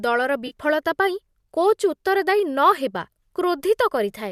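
At 0.47 s there is AAC frame loss with concealment, lasting about 40 ms, which fits four lost frames of about 10 ms each. The decoder patched the gap from the last good spectrum. The speech briefly turns smeared and noisy, over the likely low-delay AAC stream.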